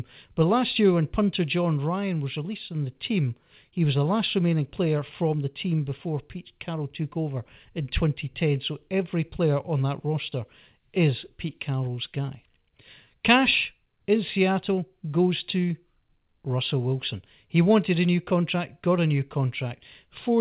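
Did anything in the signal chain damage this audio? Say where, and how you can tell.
No, no stage in the chain damaged this speech; the lack of content above 4 kHz is just what a 64 kbps G.711 mu-law call path normally does.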